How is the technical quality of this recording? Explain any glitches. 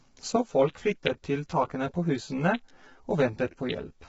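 The recording has two clear technical problems. One runs through the whole clip, and the other begins early and lasts to the end.

Low-delay AAC compression affects the full clip. The speech sounds rough and grainy, with noise filling the gaps between harmonics. Nothing is present above 7.8 kHz, so the top band is cut away. This is likely AAC-ELD, the low-delay codec used in video calls. Its short frames resolve pitch harmonics poorly and spend bits inefficiently. The heavy damage points to a low bitrate, around 16 kbps.

Channel delay, heard as comb filtering, starts at 0.36 s and continues to the end. One channel arrives roughly 10 ms late, and the two are summed to mono. Content common to both cancels at evenly spaced frequencies. The first notch sits near 40 Hz, with more notches repeating up the spectrum. The speech turns hollow and phasey, slightly rough and doubled.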